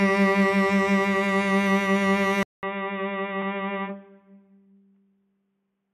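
At 2.43 s the music drops out for 200 ms, then returns through what is likely an input switched to a poorer device. It stays narrow and boxy to the end, with nothing above 3.7 kHz, a level roughly 5 dB lower, and a new noise floor. A spectrogram shows a sharp ceiling and a gap, and the waveform steps down.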